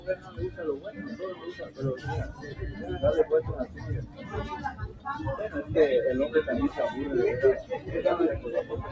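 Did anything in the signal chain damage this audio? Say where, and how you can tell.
Yes. In the call processing stage, whose band stops at 8 kHz, a speech noise suppressor stayed on, mistaking steady sound for noise. Levels swing by around 15 dB, pumping and thinning.

Sound cut by the noise suppressor appears at 0.0–0.59, 0.84–1.04, 1.35–1.8, 2.32–2.52, 3.66–3.84, 4.03–4.33, 4.72–5.06 and 7.63–7.88 s. Held material and decays sink by about 7 to 10 dB.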